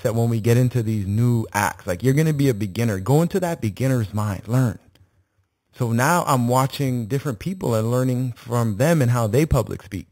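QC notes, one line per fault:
Throughout, imaging from sample-and-hold upsampling: a bright, metallic fizz rides on the speech, rising and falling with its level, sitting about 20 dB below the signal, and strongest in a 4 to 8 kHz band where the lowest mirror copy moves against the pitch. The fizz points to speech at an 8 kHz rate raised to 48 kHz by repeating each sample without a smoothing filter, so spectral mirrors appear around each multiple of 8 kHz.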